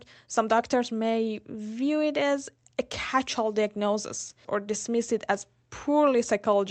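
No technical faults can be heard in this speech clip. It has clearly passed through a WebRTC call path, and its audio band stops at about 8 kHz, which fits an Opus call codec.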